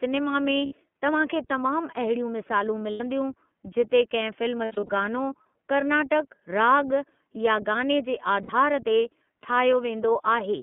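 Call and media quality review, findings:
iLBC codec, whole clip. Band-limited to about 200 Hz to 3.4 kHz. Rough, slightly synthetic speech, plainly audible. Each frame's excitation coded independently, which fits the 13.33 kbps mode with 30 ms frames.

Lost iLBC frames at 0.66–0.73 s, 2.91–3.01 s, 4.65–4.89 s and 8.43–8.50 s. Held buzzy vowel fills each gap. Decoder repeats the last pitch cycle plus noise. The 4.65 s loss is scattered, with runs under a tenth of a second. Recovery is immediate.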